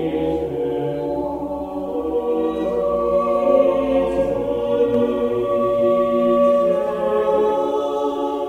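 A doubled audio track enters this music clip at 4.94 s and runs to the end: a second full-band copy of the music trails the original by roughly 300 ms, around 5 dB quieter. It cuts in abruptly rather than building up, and it carries no decay or room colour, so it reads as a duplicate and not as an echo or reverb. The likely cause is the same signal being captured twice, once through a slower path, or an edit leaving two copies out of step.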